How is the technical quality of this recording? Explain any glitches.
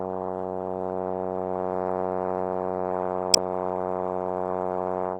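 The music carries one audible glitch, a corrupt frame decoded, at 3.32 to 3.38 s. It sounds like a sudden loud blip of misplaced noise, peaking around -5 dBFS. A couple of damaged compressed frames were decoded anyway, so misread codes and gains scattered energy into the wrong frequencies for about 60 ms.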